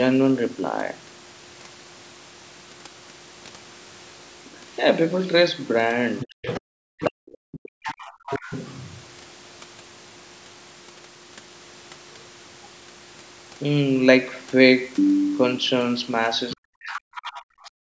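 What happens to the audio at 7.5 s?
At 7.5 s the echo canceller has likely run into double talk: with both ends speaking at once, it could not tell the near talker apart from the loudspeaker echo and suppressed both. This is speech suppressed in double talk. From 6.98 s to 8.31 s the talker's speech sinks sharply, at its deepest by around 40 dB, so it nearly disappears before returning at full level.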